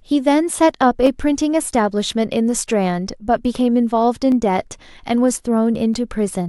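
Two devices in this speech recording's chain were likely running on separate clocks about 200 ppm apart, so the buffer between them drifts until a small block of roughly fifteen samples is dropped or repeated. Those clock drift buffer slips come through as about four regular clicks spaced 1.62 s apart, from 1.06 s to 5.94 s.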